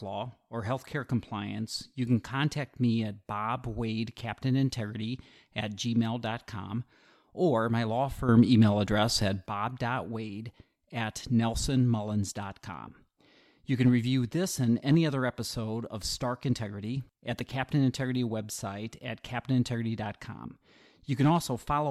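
At 8.29 s, right after "or my law", a sudden gain jump lifts the speech and background together by about 8 dB until 9.46 s, likely a digital gain change applied without a ramp. The waveform steps abruptly taller; the spectrogram brightens evenly across all frequencies.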